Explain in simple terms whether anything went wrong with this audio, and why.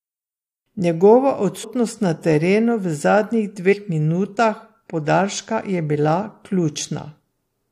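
Two brief glitches interrupt this speech, at 1.63 s and from 3.72 to 3.74 s. Each is damaged data in a compressed stream. Some stored bytes were wrong. The decoder lost its place and searched for the next good frame, producing a short chirp, squawk, click or gap.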